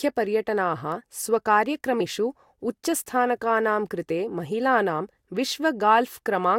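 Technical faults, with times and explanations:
2.00 s, compressed frames skipped: the speech jumps forward by about three frames, dropping roughly 70 ms, because those frames never reached the decoder intact.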